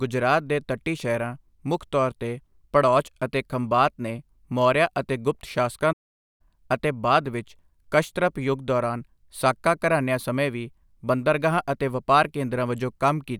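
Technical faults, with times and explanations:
5.92 to 6.41 s, playback stall: the speech cuts off abruptly in mid-flow and the output drops to dead silence for about 470 ms before resuming. The gap has no fade or tail, which sets it apart from a natural pause. The likely cause is the player running out of buffered data, or its audio thread being blocked, so nothing reached the output until the buffer refilled and playback picked up again.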